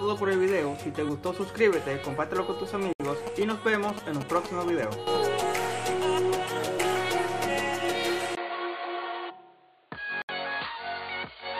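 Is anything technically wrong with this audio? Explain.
Yes, there are three kinds of fault.

Gap at a join of encoded pieces: separately encoded segments were joined untrimmed, so encoder delay and padding open silent dropouts, 69 ms at 2.93 s and 70 ms at 10.22 s, before the sound resumes.

GSM signalling bursts: from 3.27 to 5.17 s, a nearby 2G phone's radio bursts are rectified by the audio circuit, producing a galloping dit-dit-dit of short 217 Hz buzzes, about 10 dB below the sound.

Input switched to a poorer device: at 8.35 s the input was likely switched to another device. After a 20 ms silence, the sound turns dull, with nothing above 4.6 kHz, about 5 dB quieter and a new noise floor roughly 35 dB down, until the end.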